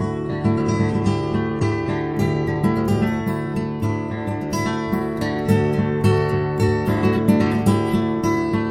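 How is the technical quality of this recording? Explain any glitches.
The recording opens at reduced quality, with one glitch. From 0.0 to 2.0 s the music comes from an adaptive stream starting at a low bitrate: the player begins on a cheap version, which fits roughly 32 kbit/s AAC, then steps up, which fits 96 kbit/s. Nothing sounds above about 10.1 kHz, so the treble is dull and artefacts stronger. At 2.0 s brightness returns abruptly without a gap. A spectrogram shows a flat ceiling at 10.1 kHz that suddenly lifts. The waveform stays continuous.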